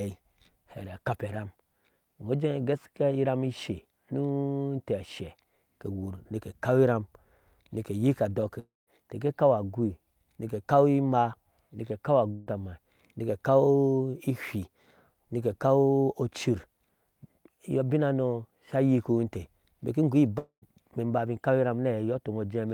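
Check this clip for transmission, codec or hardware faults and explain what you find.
The speech has three gaps that sound like a long network dropout. The audio stopped arriving, the receiver stretched the last sound into a fading buzz, and the lost speech never returned. Each is likely a network dropout. At 8.59 to 8.90 s, about 0.28 s is lost, and the buzz fades into silence. At 12.31 to 12.49 s, just after "imaa nike ekaw", about 0.16 s is lost, bridged entirely by buzz. At 20.38 to 20.65 s, about 0.24 s is lost, and the buzz trails into a brief silence.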